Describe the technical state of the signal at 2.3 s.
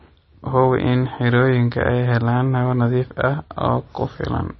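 At 2.3 s the speech carries MP3 compression, present across the whole clip and most likely from a low-bitrate encode near 24 kbps. Starved of bits, the encoder has cut everything above about 5.9 kHz and zeroed weak frequency lines that flicker between frames, leaving the speech dull, watery and swirly.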